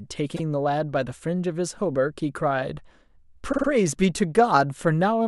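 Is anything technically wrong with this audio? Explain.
Yes, there are repeated frames in this speech. At 0.35 to 0.41 s a 52 ms block, which fits two compressed frames, plays once more. At 3.52 to 3.67 s the same-sized block plays three more times. The decoder received the same compressed data more than once and rendered it each time, so the speech stutters. The clip grows by about 52 ms and then 157 ms. A spectrogram or waveform shows identical 52 ms patterns side by side.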